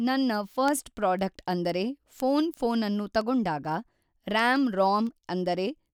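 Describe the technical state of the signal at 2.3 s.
Word clock ticks are present at 2.3 s, part of a run lasting from 0.18 s to 5.91 s. The receiving device is running on its own clock instead of locking to the digital link's sender. The two drift apart by something on the order of 150 ppm, and each time they slip past one another a sample is dropped or repeated. Here the speech carries a sharp tick roughly every 0.15 s, around forty across the span, consistent with single-sample slips.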